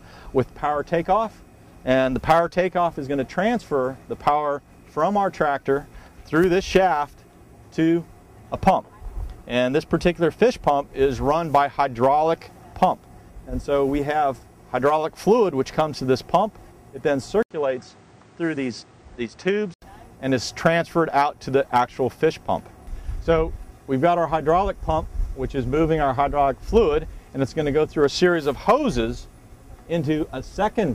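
At 17.43 s an 80 ms silence is followed by sound that is duller and boxier, with nothing above 9.1 kHz, a level drop of roughly 5 dB and a new noise floor about 30 dB down, until 19.82 s. This is likely an input switched to a poorer device.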